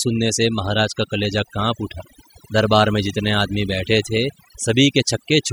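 Throughout the speech, overdone noise removal is audible: an aggressive noise reducer turns any band near its noise estimate far down or off, leaving a lowered background that breaks up into twinkling specks. A spectrogram shows scattered isolated time-frequency dots and hollowed gaps inside the speech harmonics.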